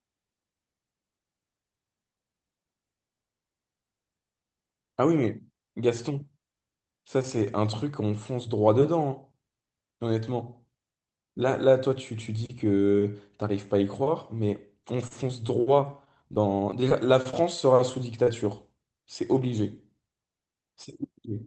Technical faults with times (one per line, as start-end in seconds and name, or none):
15.07-15.51 short stall from a late packet
15.28-15.31 short concealed packet loss
16.05-17.35 scattered short gaps
18.23-18.29 short concealed packet loss